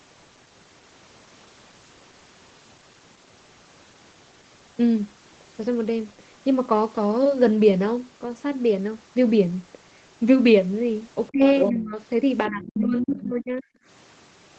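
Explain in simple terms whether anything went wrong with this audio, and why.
Two things went wrong, both around the end of the call.

Other side's voice leaking through: the echo canceller likely failed to fully remove the far end's voice, picked up from the loudspeaker. A second voice slips in from 11.29 to 11.73 s, fairly loud, then more faintly from 12.45 to 12.83 s and 13.16 to 13.29 s.

Speech suppressed in double talk: with both people talking at once, the echo canceller likely turned everything down to be safe. The main talker sharply drops out from 11.32 to 11.41 s, 11.70 to 11.97 s, and for about a second between 12.48 and 13.73 s.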